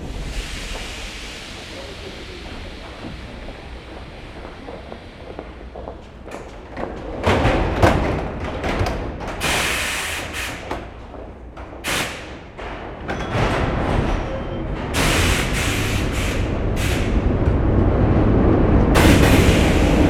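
No technical faults are audible.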